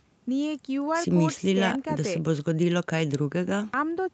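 No technical faults can be heard in this speech recording.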